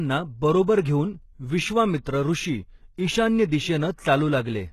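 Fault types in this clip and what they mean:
HE-AAC compression: likely a very low-bitrate HE-AAC encode, around 16 kbps, with treble rebuilt by band replication, so speech sounds plainly coded, s sounds turn gritty, metallic or lispy, with nothing above 12.3 kHz.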